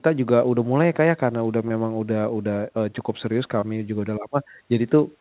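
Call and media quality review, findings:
Short concealed packet loss, 1.68 s and 3.60 s: 20 ms smears bridged by the decoder continuing prior sound, not silent dropouts or clicks. Band-limited at 4 kHz, fitting a G.711 narrowband call path.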